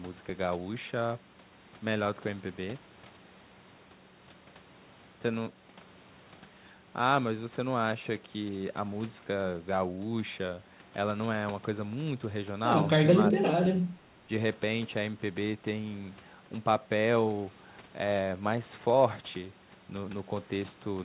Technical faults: speech suppressed in double talk

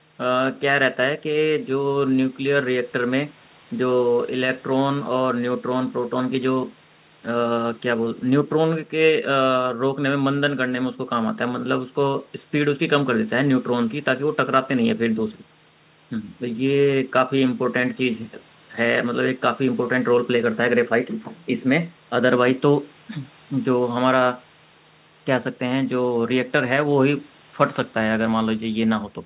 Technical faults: none

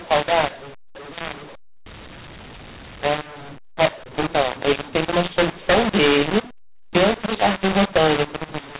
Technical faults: mu-law and A-law mixed up

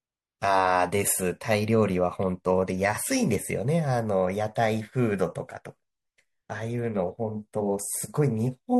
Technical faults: pre-echo

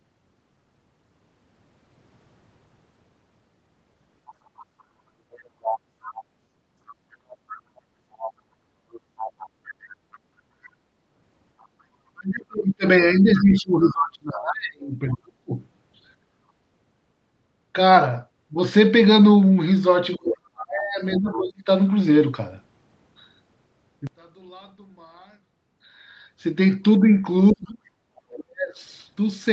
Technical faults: other side's voice leaking through; background gated by the echo canceller; speech suppressed in double talk; one channel inverted

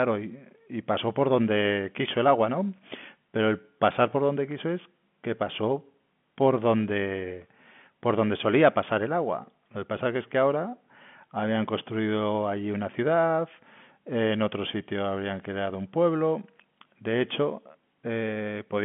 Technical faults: none

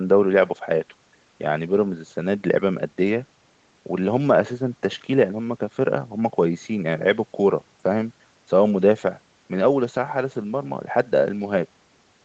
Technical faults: none

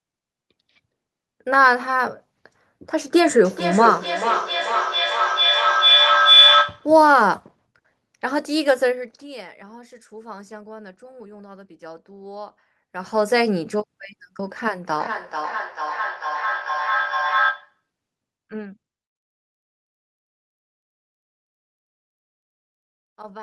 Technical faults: feedback howl; feedback echo between two devices

